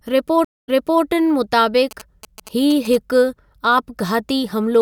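At 0.45 s the stream connection dropped, and the player had to reconnect and start a new decoder partway through the stream. In this clip that produces a stream reconnect lasting until 1.04 s. The speech cuts off into about 207 ms of silence, then picks up again roughly 0.38 s earlier than where it stopped, so a short stretch is heard twice. The restart has the soft, slightly muted onset of a decoder beginning from scratch.

From 1.91 s to 2.96 s, a nearby 2G phone sending signalling traffic emits short groups of radio bursts, and the audio circuitry rectifies them into sound. These GSM signalling bursts come through as a galloping dit-dit-dit of short buzzes at the 217 Hz burst rate. They sit about 20 dB below the speech.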